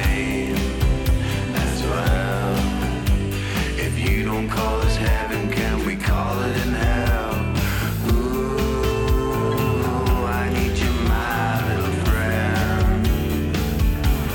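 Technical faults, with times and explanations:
Nothing here stands out as a technical fault; the whole thing sounds fine from beginning to end.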